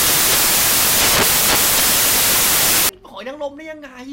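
From the start to 2.89 s the speech turns into loud, harsh broadband noise, the sound of samples built from the wrong bytes. The reader assembled each sample incorrectly, whether offset by a byte, swapped in order or misaligned, so the rapidly fluctuating low-order bits landed in the most significant positions. The result is broadband noise at high level.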